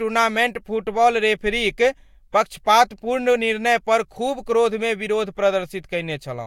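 Speech recording; no technical fault found.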